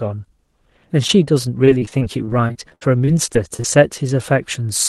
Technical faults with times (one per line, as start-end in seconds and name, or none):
1.07-1.11 short concealed packet loss
1.65-3.66 repeated packet loss (robotic sound)